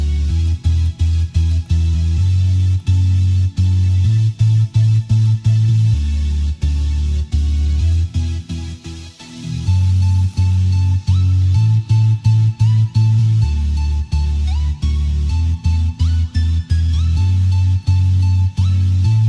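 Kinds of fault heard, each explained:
Nothing stood out on listening.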